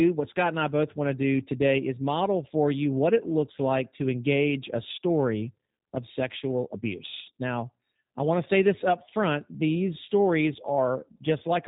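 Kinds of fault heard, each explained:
G.729 codec: speech rebuilt from a vocal-tract filter and sparse pulses, nothing above 4 kHz, plainly rough and synthetic throughout, unlike a clean low-pass cut.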